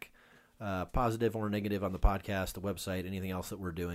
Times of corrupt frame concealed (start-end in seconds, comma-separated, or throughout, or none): none